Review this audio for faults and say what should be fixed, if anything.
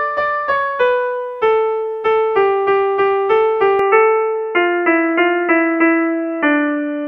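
The input likely switched to a poorer device at 3.79 s, and the recording stays on it to the end. From that point nothing above 3 kHz gets through, so the sound turns dull and boxy with no gap at the switch. The level stays about the same, and a faint new background noise appears, around 50 dB below the signal. To prevent this, lock the recording to one chosen input device and stop the system from switching automatically to other microphones or headset call profiles mid-session.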